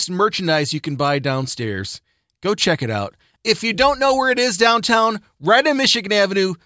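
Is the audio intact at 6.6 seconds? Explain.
Yes, at 6.6 seconds the audio is intact, with no dropout, click or other fault audible there.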